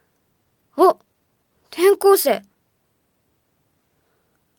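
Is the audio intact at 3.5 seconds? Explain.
Yes, the audio is intact at 3.5 seconds, with no dropout, click, distortion or other fault to be heard at that moment.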